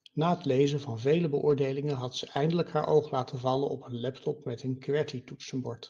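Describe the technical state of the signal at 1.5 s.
At 1.49 to 1.51 s the speech turns briefly rougher and noisier for about 20 ms, with no gap or dropout. This is a lost packet rebuilt from error correction: what sounds like a single lost packet was replaced by the lower-bitrate copy carried in the following packet, so the decoder filled the slot at reduced quality.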